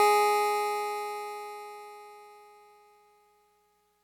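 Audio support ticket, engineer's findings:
Gritty hiss riding on the music, 0 to 1.5 s, heaviest on loud, bright passages, gone in quiet gaps. Sample clock jitter at the converter: timing wobble of a few microseconds, error roughly 30 dB below signal, worst on steep waveform slopes.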